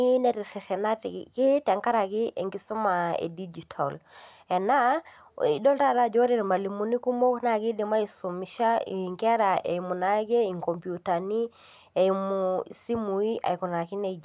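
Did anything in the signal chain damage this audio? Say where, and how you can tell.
No, nothing in the signal chain damaged this audio.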